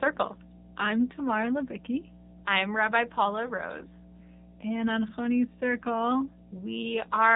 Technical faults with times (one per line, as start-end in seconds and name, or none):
0.00-7.35 mains hum
0.00-7.35 AMR narrowband mobile codec